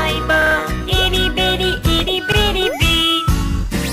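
The audio has a repeated buffer fault twice, at 0.42 to 0.56 s and 2.32 to 2.37 s. A 46 ms slice replays with hard joins, fitting a 2048-sample buffer.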